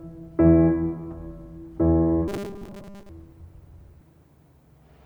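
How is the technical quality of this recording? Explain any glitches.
The music has one glitch. From 2.28 to 3.09 s it turns into a rigid robotic buzz near 200 Hz, likely from repeating 5 ms buffers for most of that stretch.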